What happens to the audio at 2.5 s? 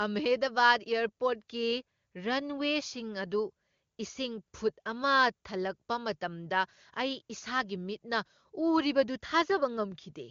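Nothing goes wrong at 2.5 s: the speech there is intact, carried through the wideband HD Voice path with only the faint, clean character of a high AMR-WB rate.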